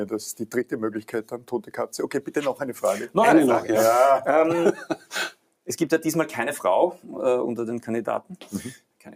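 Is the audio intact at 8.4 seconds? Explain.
No. Between 8.22 and 8.53 s the sound is cut by the noise suppressor. The processor judged this passage to be noise and pulled it down harder than the surrounding audio, with the deepest drop about 11 dB. Sustained and decaying parts of the sound lose the most level and their tails end early, while any sharp onset comes through largely intact. Across roughly 300 ms the passage thins and dips before the level recovers.

That dip sits on top of a broader problem in the clip. A noise suppressor built for speech is applied to music or other sounds. It treats steady tones, ambience and reverberant tails as unwanted noise and attenuates them, letting transients pass. The gain it applies swings by around 10 dB as it switches between treating material as signal and as noise, so the sound pumps and flutters and held tones and tails sink away.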